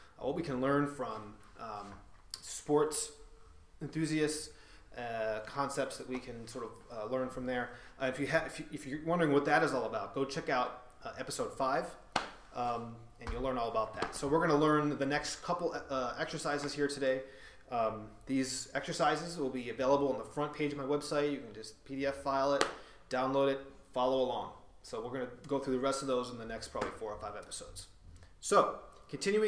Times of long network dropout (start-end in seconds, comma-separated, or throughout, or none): none